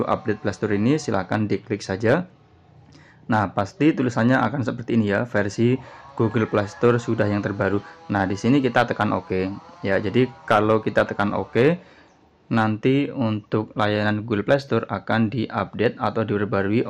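From start to finish the sound is dull and gurgling, with a granular grit and upper bands that flicker in and out. This is likely MP2 compression: starved of bits, Layer II drops high sub-bands and coarsely quantises the rest, which fits a rate near 80 kbps.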